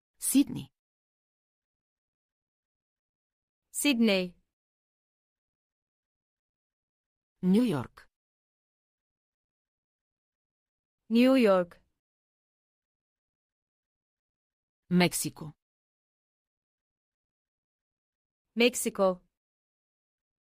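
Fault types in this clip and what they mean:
No audible faults: no dropouts, clipping, distortion or timing errors turn up anywhere in the clip.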